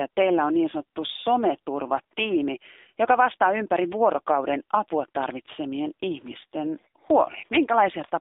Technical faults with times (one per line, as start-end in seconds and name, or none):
0.00-8.21 AMR narrowband mobile codec